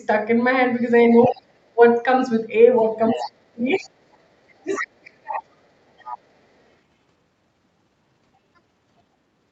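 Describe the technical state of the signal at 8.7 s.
At 8.7 s the speech is intact, with no dropout, glitch or distortion, and the absence of content above 8 kHz is just the normal band limit of the call path and microphone processing.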